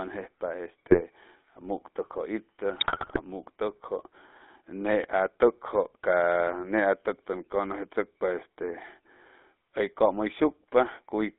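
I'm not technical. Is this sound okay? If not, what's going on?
No, not quite. The whole clip has the sound of an old GSM full-rate codec, the first GSM codec. It squeezes the voice hard and keeps only the range between about 250 Hz and 3.6 kHz, so the speech comes out buzzy, gravelly and muffled all the way through.

On top of that there are GSM bit errors, from about 0.87 to 1.04 s and again from about 2.78 to 3.21 s. Scrambled data reaches the decoder and throws off its settings, so the voice briefly breaks into squawks, pops and gargling. The second burst is longer and rougher.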